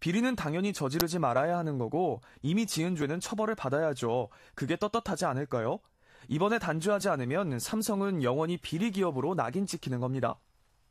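At 1.0 s there's an uninitialised buffer: a 10 ms block got played before any audio was written into it, so whatever junk sat in memory came out as samples. You hear it as a sudden, loud spit of digital noise in the speech.

Then there's overlap between stream segments at 3.02 s and again at 7.01 s, four seconds apart, matching 4 s segment boundaries. The timestamps overlapped, so the player trimmed real audio it thought was doubled. Each time roughly 17 ms vanishes, leaving a small skip.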